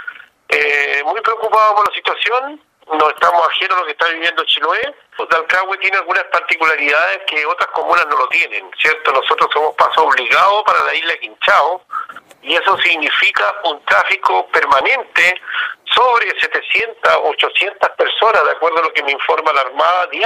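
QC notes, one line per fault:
1.86, 4.84, 7.82, 10.80, 14.81 and 16.79–16.81 s, overlap between stream segments: each boundary loses 10 to 20 ms where overlapping time stamps make the player trim real sound, so the waveform jumps and a small click or skip results, fitting roughly 1-second segments.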